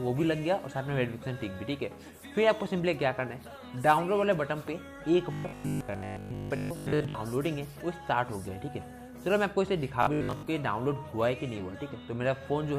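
From 5.33 to 7.15 s and again from 10.03 to 10.47 s, robotic sound from repeated short buffers sets in. The audio becomes a rigid, metallic 50 Hz buzz, likely from a 20 ms chunk replayed while most fresh audio is skipped. Unlike dropouts, nothing goes silent.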